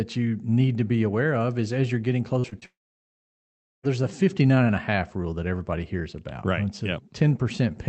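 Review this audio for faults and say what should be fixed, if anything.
Short concealed packet loss at 2.39–2.46 s, 2.50–2.54 s and 2.60–2.64 s: about 40, 20 and 20 ms of audio arrived too late, so the decoder extended the preceding speech and produced brief smears. Long network dropout, likely cause, from 2.66 to 3.85 s: about 1.2 s of speech is gone, with a short fading continuation and then roughly 1.1 s of near-silence before the speech resumes partway through. The call codec's audible band stops near 8 kHz, which fits Opus at about 32 kbps. To prevent both faults, stabilise the network link and enable in-band FEC with a somewhat deeper jitter buffer, so that late or lost packets can be recovered instead of concealed.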